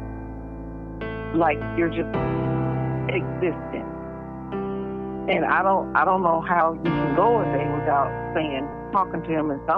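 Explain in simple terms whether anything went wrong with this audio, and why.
Yes, something went wrong. The audio briefly jumps ahead four times: at 2.00, 5.32, 6.60 and 8.71 seconds. This fault is called compressed frames skipped. The file stores sound in small blocks about 26.1 ms long. Some blocks were missing or rejected as damaged, so the player skipped them. The jumps lose roughly 70, 30, 50 and 70 ms of sound.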